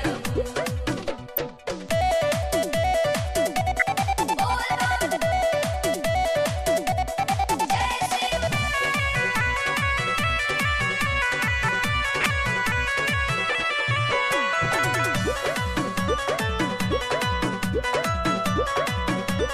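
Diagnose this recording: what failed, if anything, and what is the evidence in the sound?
Corrupt frame decoded at 1.32–1.38 s, 3.79–3.82 s and 12.21–12.26 s: brief, loud chirp-like bursts, each spanning a few codec frames. The codec stage failed. Flipped bits reached the decoder, which played the damaged frames anyway, misplacing energy across frequencies until clean frames resumed.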